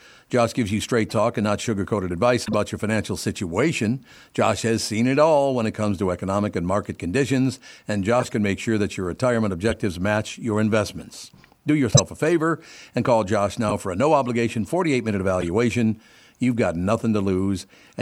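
Corrupt frame decoded, at 1.09–1.15 s, 2.45–2.54 s before "your financial situation", 8.20–8.31 s between "and market conditions and" and "can make sure that", 9.69–9.74 s, 11.91–12.00 s (loudest), 13.65–13.72 s before "for a no obligation", and 15.41–15.48 s. Damaged frames were decoded anyway, so each brief stretch throws energy at the wrong frequencies and is heard as a squeaky chirp or noisy blip. A dropout would leave silence or a smoothed repeat instead.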